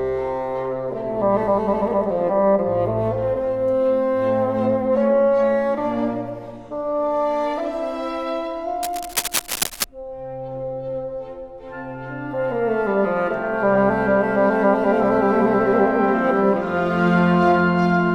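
Cable scratch noise appears from 8.83 to 9.84 s: about a second of dense, irregular scratching laid over the sound, only slightly quieter than it. The likely cause is a worn cable or connector being moved, its contact resistance fluctuating rapidly.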